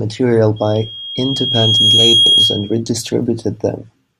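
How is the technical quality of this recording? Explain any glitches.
The recording is marred by one serious fault. From 0.56 to 2.81 s there is loudspeaker feedback squeal. The microphone picks up its own loudspeaker, and at 3.3 kHz the loop gain passes one. The tone swells over about a second and a half, ending a few decibels above the speech.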